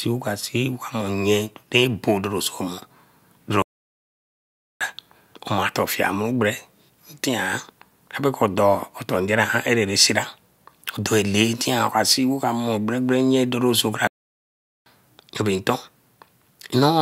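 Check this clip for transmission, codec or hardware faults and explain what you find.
Two playback stalls, at 3.62–4.81 s (1.18 s) and 14.07–14.86 s (0.79 s, after "gbere nye doso kra"), where the speech drops to silence mid-flow, likely from the player running out of data or a blocked playback thread.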